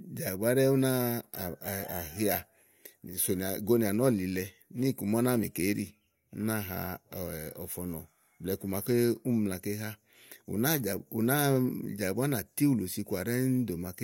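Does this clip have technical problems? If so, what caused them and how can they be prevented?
No, there are no technical problems.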